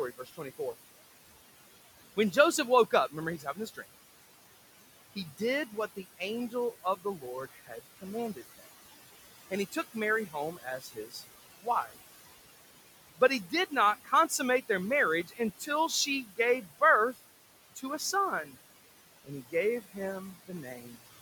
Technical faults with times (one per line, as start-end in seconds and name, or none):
0.00-21.22 noise suppressor artifacts
0.17-0.74 speech cut by the noise suppressor
2.91-3.79 speech cut by the noise suppressor
5.15-8.66 speech cut by the noise suppressor
9.51-11.97 speech cut by the noise suppressor
13.17-14.63 speech cut by the noise suppressor
15.24-17.18 speech cut by the noise suppressor
17.75-18.53 speech cut by the noise suppressor
19.25-20.99 speech cut by the noise suppressor